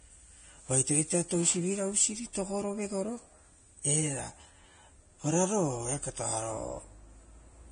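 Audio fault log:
throughout Vorbis compression: hissy, grainy treble stopping sharply at 9.7 kHz, likely heavy Vorbis coding near 24 kbps; the spectrogram shows a hard ceiling with speckled highs.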